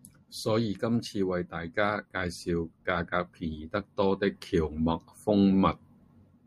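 No technical faults are audible.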